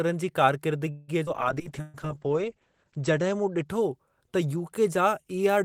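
At 0.91 s the speech stalls into a fading buzz or hiss until 1.11 s. This is a call audio freeze, likely a jitter buffer running dry. Speech resumes where it stopped, 165 ms late.

At 1.26 to 1.30 s, a skip ahead jumps forward. Roughly 70 ms of speech is dropped, and the two sides are joined almost directly.

From 1.33 to 4.56 s, a call bitrate drop takes the encoder from 32 to 9 kbps. Bandwidth narrows from 20 kHz to 8 kHz. The speech turns muffled and rough, bottoming out for 1.34 s.

Inside that stretch, at 1.81 to 1.97 s, a burst of packet loss removes 120 ms. A decaying buzz or hiss fills the hole before speech continues further on.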